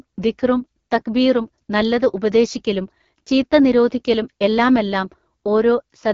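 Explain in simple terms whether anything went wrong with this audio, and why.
Yes, something went wrong. From start to finish, the speech has passed through the AMR wideband (HD Voice) codec at one of its lowest settings, so it sounds rough and raspy. Unlike an ordinary phone line, it keeps some brightness, but nothing above about 7.5 kHz.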